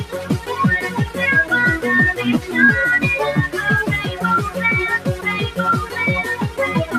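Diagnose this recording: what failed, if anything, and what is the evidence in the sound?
Call processing: a noise suppressor applied to music or sounds stayed active, swinging gain by roughly 10 dB. The waveform envelope pumps, and sustained spectrogram bands flicker and thin.

Sound cut by the noise suppressor: the suppressor pulled sound down at 0.04–0.51 s (about 8 dB), 4.07–4.23 s (about 6 dB) and 4.99–5.26 s (about 7 dB). These show as darkened spectrogram patches and waveform notches.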